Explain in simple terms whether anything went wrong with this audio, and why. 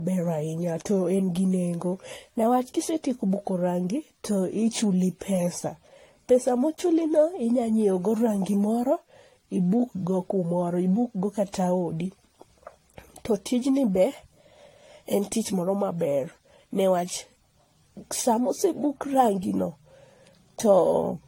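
Generation loss runs through the whole recording: the speech sounds swirly, smeared and hollow, with blurred starts to sounds and nothing above 16.6 kHz. It was likely saved in a compressed format about five times over, each pass adding fresh damage.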